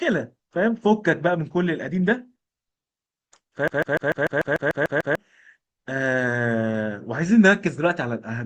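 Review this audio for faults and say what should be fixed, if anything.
From 3.68 s to 5.15 s the speech is caught in a CD stuck on one turn. A fragment about 148 ms long plays about ten times in a row. A brief mute is audible at each jump back. The result is a fast, perfectly even stutter. A scratch on the disc is sending the laser back one track at the same point on every rotation. The fix is to re-rip this section from a clean disc. To prevent it, rip with a secure, error-checking ripper from an undamaged disc.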